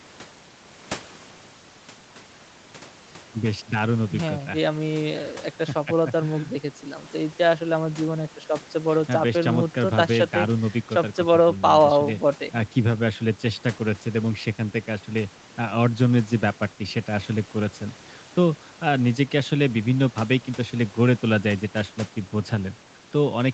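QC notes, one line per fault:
No faults found; the speech is band-limited at 8 kHz, as expected from the call's microphone processing and codec path.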